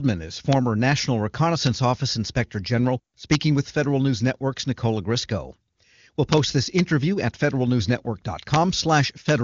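A gain or summing stage in the speech path lets integer overflow happen: peaks that exceed the largest storable value wrap around to the opposite sign instead of being held at the limit. Each overshoot, from about 0 dB at 0.53 s to about 2 dB at 3.32–3.35 s and 6.33–6.38 s, then about 1 dB at 6.79 s, 8.54–8.56 s and 9.29–9.31 s, throws the waveform across its full range, giving harsh, abrupt cracks far sharper than clipping.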